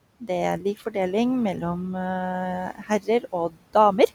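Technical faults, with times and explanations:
Throughout: noise suppressor artifacts. The suppressor pulls the room noise down by about 19 dB in the gaps, so the background, sitting about 18 dB under the speech, dips between phrases and swells back underneath them.
0.6–0.95 s and 2.75–3.75 s: speech cut by the noise suppressor. It mistakes quieter bits of speech for noise and ducks them with the background. There's about 9 dB of drop over roughly 150 ms early on, then up to about 19 dB across nearly half a second later, so the affected speech sounds swallowed.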